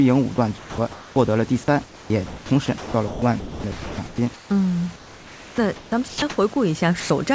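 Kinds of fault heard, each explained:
sound dropped by the voice detector: At 0.58 to 0.78 s and 7.00 to 7.10 s the speech gives way to steady hiss, losing about 180 ms and 100 ms. The sender's voice detector likely judged quiet speech to be background and stopped sending.
comfort noise in place of the background: From 0.58 to 1.16 s the real room noise, about 24 dB below the speech, turns into flat, featureless noise. This is likely the receiver filling a transmission pause with synthetic noise shaped like the background.
sound chopped by the voice detector: From 1.84 to 4.50 s and 4.96 to 6.56 s the speech sounds choppy, with parts of it replaced by comfort noise totalling 1.6 s and about 1 s. This likely comes from the detector repeatedly switching sending on and off.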